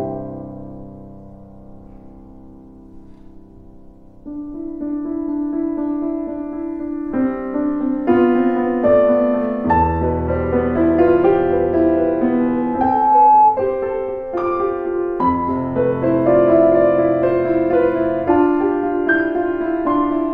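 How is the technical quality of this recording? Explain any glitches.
One fault stands out: a loudspeaker feedback squeal from 12.40 s to 13.67 s. A pure tone at 852 Hz appears and swells over roughly 0.7 s until it sits about 10 dB above the rest of the sound, then stops. The microphone was picking up the loudspeaker it was driving, and at 852 Hz the loop gain went above one, so that frequency kept re-amplifying itself until the loop was broken.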